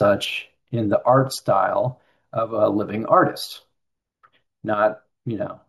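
Speech that was upsampled by sample-and-hold, repeating each sample without a smoothing filter, which fits a 16 kHz source raised to 48 kHz. The result is imaging: a mirrored copy from 8 to 16 kHz, about 20 dB below the speech, heard throughout as a bright metallic fizz that tracks the voice.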